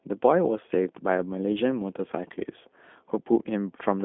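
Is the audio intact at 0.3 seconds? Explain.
No. At 0.3 s, as throughout, the speech sounds thin, boxed-in and plainly rough and synthetic, with nothing above 3.7 kHz. This is G.729 codec damage: the speech is rebuilt from a vocal tract filter, pitch predictor and sparse pulses, consistent with an 8 kbit/s line.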